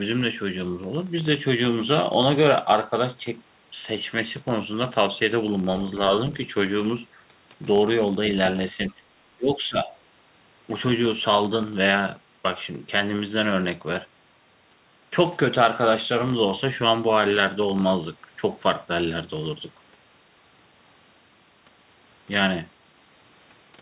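A steady low buzz runs under the whole speech recording, ticking at about 43 Hz and growing louder and softer with the level of the talker. This is a filter restarted on every block: the processing forgets its state at each block boundary and begins again from silence, so every block opens with a small click, and together these clicks form the buzz. The rate points to blocks of 1024 samples. At 8.89 s a brief, very faint scrap of a second voice slips in for about 40 ms, sitting roughly 35 dB below the speech. This is most likely the other side's voice leaking through: the far end's audio played from the talker's loudspeaker was picked up by the microphone, and the echo canceller left a trace of it behind. From 9.37 to 9.92 s the talker's speech sinks in patches, dropping by around 15 dB at its deepest over roughly half a second in total. That pattern fits speech suppressed in double talk, where both sides talk at once and the echo canceller turns the near-end voice down together with the echo it cannot separate. 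Throughout, the sound has nothing above 4 kHz, as the G.711 call codec carries it.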